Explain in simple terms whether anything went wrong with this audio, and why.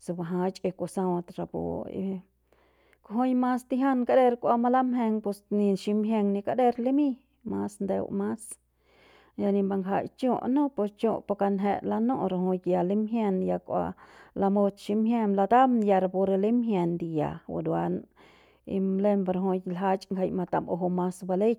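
Nothing went wrong that I could hear: listening to the whole speech recording, no sound stood out as a problem.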